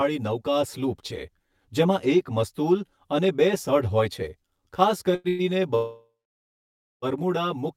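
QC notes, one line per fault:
Throughout: channel delay (comb filtering). One channel of the speech runs roughly 10 ms behind the other, and when the two are summed to mono, everything common to both cancels at evenly spaced frequencies, starting somewhere near 50 Hz and repeating about every 100 Hz above it. Those fixed notches give the whole clip a hollow, phasey colour that stays the same from start to finish.
5.15–5.27 s: short stall from a late packet. Just after "સઢ હોય છે ખાસ", a packet failed to arrive on time and the jitter buffer ran dry, so the receiver held the last sound for about 89 ms until the data turned up. It then carried on from the same point, so nothing is lost, but that sound is drawn out too long with a slight buzz or dip.
5.28–5.42 s and 5.75–7.05 s: call audio freeze. Both are likely caused by packets delayed in transit and an emptied jitter buffer. The first, again after "સઢ હોય છે ખાસ", extends the last sound as a fading buzz or hiss for about 106 ms. 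The second runs about 1.3 s, with the filler decaying into roughly 0.9 s of silence before the speech resumes from where it stopped, leaving a gap rather than missing material.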